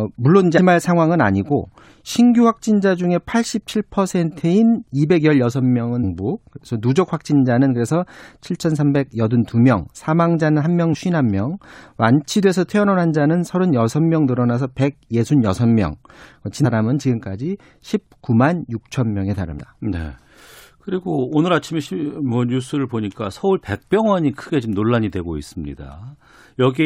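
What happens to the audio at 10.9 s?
Damaged data in the compressed stream hits at 10.93 to 10.95 s. The decoder meets corrupted bytes, misreads or rejects the frames there, loses sync and hunts for the next valid frame header, leaving a brief chirp or blip cutting into the speech.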